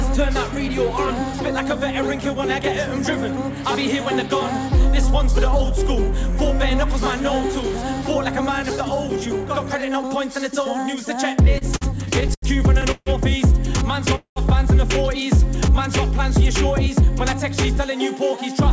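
From 11.45 to 12.45 s, late packets kept emptying the jitter buffer, causing repeated stalls (stutter): nine short gaps, the longest 80 ms, are filled with continued sound, so the audio drags and stutters.

At 12.91 to 13.09 s and again at 14.15 to 14.39 s, a call audio freeze, likely from packets held up in transit, stretches the last sound into a fading buzz, dropping to about 40 ms and then 100 ms of silence before the audio resumes where it stopped.

From 17.77 to 18.52 s, a jitter buffer speed-up trims tiny pitch-period slices, roughly 40 ms in total, to shed surplus delay. The sound runs about 4% fast at unchanged pitch. Throughout, nothing is heard above 8 kHz, which fits a G.722 call codec.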